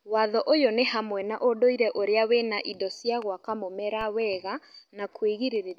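A DC step at 4.01 s, just after "cia gwaka mũmera", shifts the zero line by about -30 dBFS, heard as a low thump that fades as a 20 Hz high-pass drains the offset.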